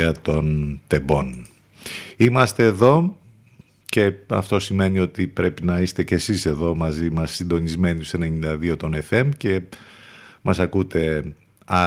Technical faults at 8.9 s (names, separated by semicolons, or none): none